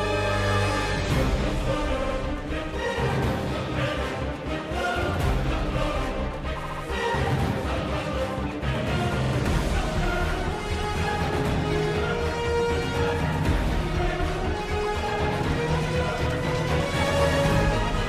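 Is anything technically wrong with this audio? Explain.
Yes, there are two faults. Throughout the clip there is a block size mismatch (truncated): one stage writes slightly longer blocks than the next stage reads, so each block's tail is discarded. That leaves a steady buzz at about 91.9 Hz, the block rate, and the speed is essentially unchanged.

There are also repeated frames at 2.01–2.15 s, 6.62–6.82 s and 9.23–9.32 s. Runs of compressed frames were delivered more than once, so the decoder replays them and the sound stutters. A 69.7 ms stretch plays twice more at 2.01 s and three more times at 6.62 s. A 46.4 ms stretch, fitting about two frames, plays twice more at 9.23 s. Together these add roughly 0.44 s.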